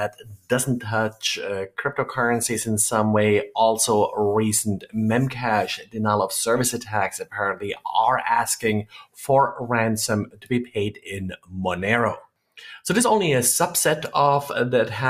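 Throughout, a noise suppressor tuned for speech is applied to the sound. It treats steady content as noise, swinging the level by roughly 10 dB, so the sound pumps and thins.

Sound cut by the noise suppressor occurs at 0.09–0.51 s, 4.79–4.95 s, 5.78–5.96 s, 6.83–7.85 s, 8.84–9.19 s, 10.25–11.54 s and 12.2–12.58 s. Sustained portions sink by about 15 to 21 dB while onsets pass.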